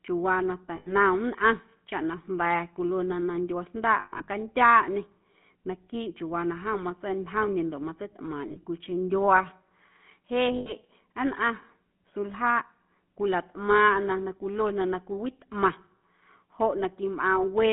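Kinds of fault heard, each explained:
GSM full-rate codec: The whole recording has passed through the original GSM speech codec, which models the vocal tract and drives it with a sparse, regularly spaced pulse excitation; the sound fits its 13 kbps rate. The band is held to roughly 150 Hz to 3.5 kHz, so the speech is thin and lacks top end, and the coarse excitation gives a plainly audible buzzy, gravelly roughness on voiced sounds.
Lost GSM frames: In four places the decoder is missing frames and fills the gap by repeating the last good frame at falling level, producing a brief rough, metallic ring in place of speech. It comes at 0.76 s just after "chiuuwaa na", at 4.0 to 4.29 s with the longest run around a tenth of a second, at 8.48 to 8.65 s in short scattered bursts, and at 10.56 to 10.72 s.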